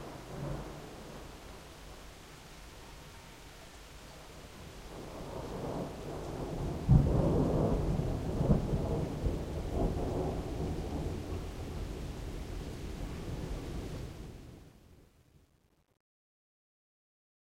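From 13.97 s to the end at 17.44 s, the fade-out suffers truncation distortion. The gain stage drops low bits without dither, with a coarseness that fits about 10 bits. From 14.45 s the tail turns gritty. The waveform shows stair-stepped, squared fragments, and the spectrogram shows broadband hash instead of a clean taper.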